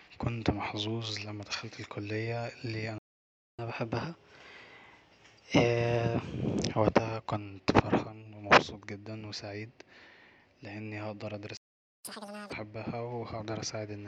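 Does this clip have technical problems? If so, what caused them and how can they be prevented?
Yes. The player most likely ran dry of buffered data or had its audio thread blocked, so this is a playback stall. The speech cuts out mid-flow for 0.60 s from 2.98 s, just after "لما دخلت الكلية اللي", and for 0.48 s from 11.57 s, just after "لاني هقدر". To prevent it, keep a deeper jitter buffer and run the audio thread at high priority, free of blocking work.

Each stall is followed by catch-up at higher speed. The player resamples its backlog to win back the lost time, so speed and pitch rise together. From 3.59 to 6.59 s the speech runs at 1.1x and sits roughly a semitone and a half sharp, returning to normal before "وقتها كنت فرحان ومبسوط". From 12.05 to 12.53 s it jumps to 2x, pitched up by nearly an octave. To prevent it, absorb the lag with gentle time-stretching or by skipping silence rather than resampling.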